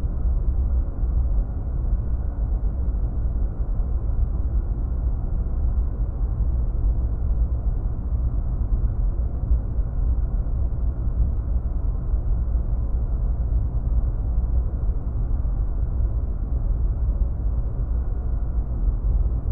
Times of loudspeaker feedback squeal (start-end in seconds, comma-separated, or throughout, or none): none